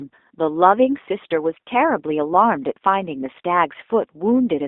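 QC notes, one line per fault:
throughout: G.729 codec. Speech is held to 250 Hz to 3.7 kHz and rebuilt from sparse pulses, so it sounds rough and synthetic, not merely narrowband.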